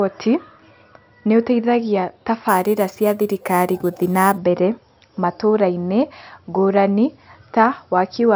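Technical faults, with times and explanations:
2.49–4.38 s, imaging from sample-and-hold upsampling: after "nĩ ũteithagia", a metallic fizz follows the speech, with mirror images at 6–12 kHz about 20 dB down, which fits 12 kHz audio raised by repeating samples without a smoothing filter.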